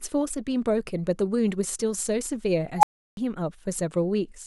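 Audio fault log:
2.78–3.17 s, unstable filter: a tone around 1 kHz swells to full loudness within about 51 ms and clips as a recursive filter's output runs away without bound. Its values then overflow, leaving 341 ms of silence in the speech until the filter resets.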